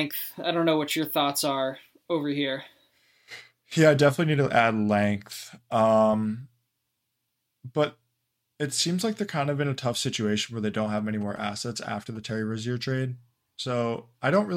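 From 10.98 to 12.17 s, GSM signalling bursts break in: a nearby phone's radio pulses get rectified, producing a galloping dit-dit-dit of short 217 Hz buzzes roughly 25 dB under the speech.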